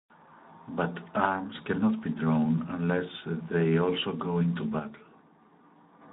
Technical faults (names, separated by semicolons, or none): Speex codec